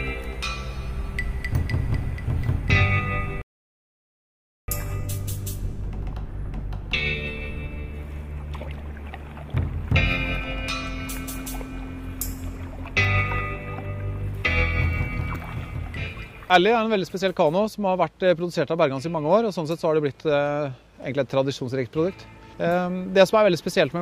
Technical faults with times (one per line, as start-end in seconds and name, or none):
3.42-4.68 rebuffering stall